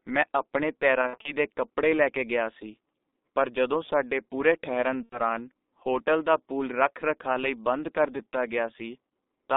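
Speech heard through the G.723.1 codec at about 6.3 kbit/s, with the band held to roughly 250 Hz to 3.7 kHz. The heavy coding leaves it muffled and hoarse, with smeared consonants. A plain band-limit would dull the sound without this roughness. VoIP packet loss concealed by the speech codec appears from 1.01 to 1.33 s, where about 120 ms of audio is missing in scattered runs, and again from 5.03 to 5.19 s, about 90 ms. The decoder fills these gaps with an extrapolated buzzy tone or coloured noise that fades, instead of the clean silence a simple dropout would leave.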